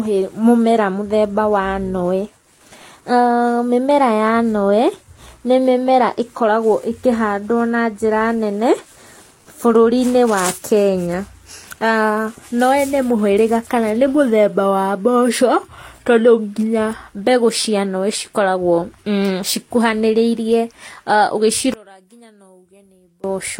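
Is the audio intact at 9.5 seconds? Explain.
No. Transcoding between lossy codecs runs throughout the clip, including 9.5 s. The speech likely passed through Vorbis and then HE-AAC, whose different artefacts are heard together. The second encoder wastes bits on the first one's errors, and nothing above 16.2 kHz survives.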